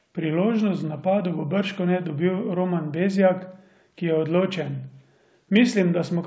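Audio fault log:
No faults are present in this speech recording. It has come over a WebRTC call path, and nothing is heard above 8 kHz, which fits the G.722 wideband codec.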